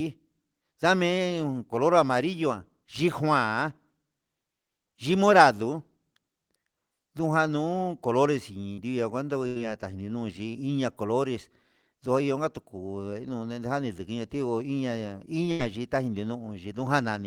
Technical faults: short concealed packet loss; burst of packet loss

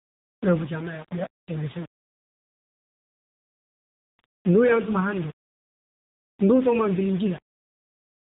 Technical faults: low bit depth without dither; AMR narrowband mobile codec

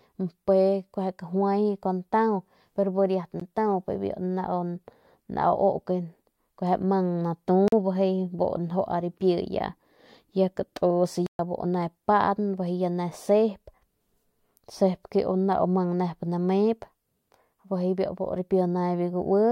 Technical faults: block of digital silence

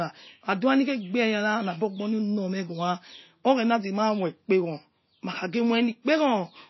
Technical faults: MP3 compression

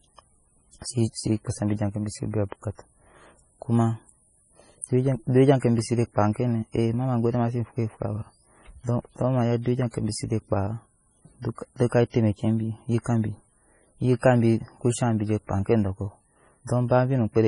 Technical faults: MP3 compression; pre-echo

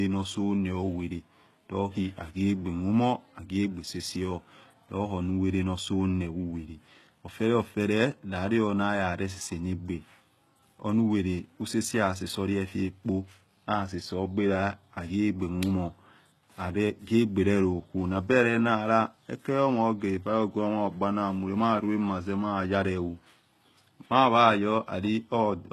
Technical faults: HE-AAC compression

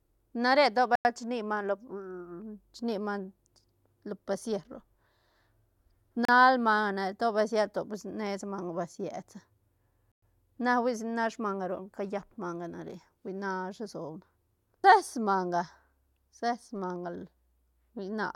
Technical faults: Bluetooth stall

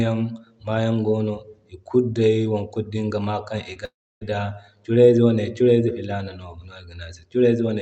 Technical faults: short concealed packet loss; long network dropout

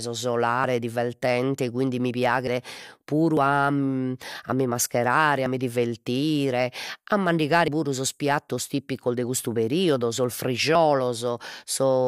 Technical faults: dropped buffer (overrun)

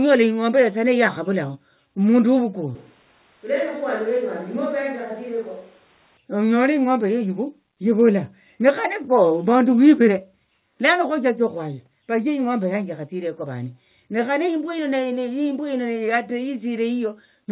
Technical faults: switch to a distant microphone

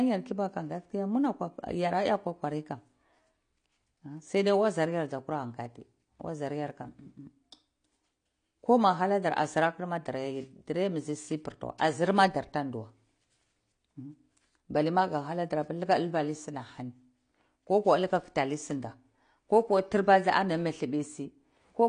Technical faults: AAC compression

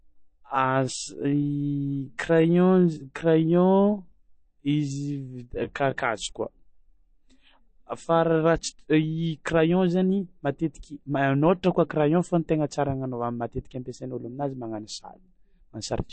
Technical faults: MP3 compression; time-stretched section

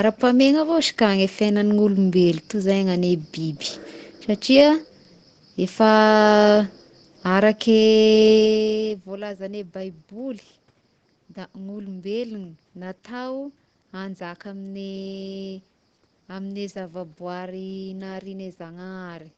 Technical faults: none

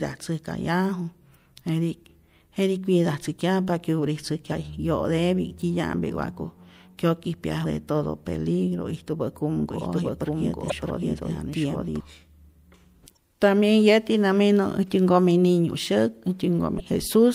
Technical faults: damaged data in a compressed stream; doubled audio track

